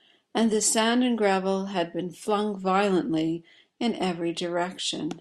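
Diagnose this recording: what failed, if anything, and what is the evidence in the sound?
Nothing failed at any stage from capture to playback: the speech shows no dropouts, clicks, clipping, level jumps or timing disturbances anywhere.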